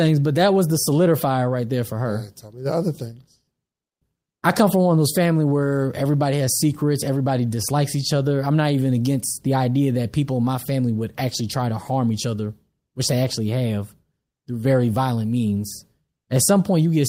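No technical faults can be heard anywhere in this speech recording.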